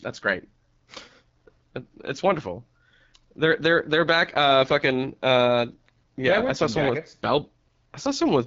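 Speech that sounds plainly rough and raspy throughout, with nothing above 7.5 kHz: the mark of the AMR wideband (HD Voice) codec, consistent with one of its lowest rates, around 8.85 kbit/s.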